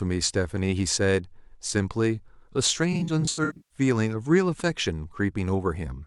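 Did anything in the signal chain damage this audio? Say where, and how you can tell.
Yes. AAC frame loss with concealment at the codec stage, 2.93 to 3.77 s: about 430 ms of scattered gaps, runs up to roughly 150 ms, each refilled from the last good spectrum. It sounds smeared and phasey, and the spectrogram shows blurred, repeated-looking slices with sagging energy.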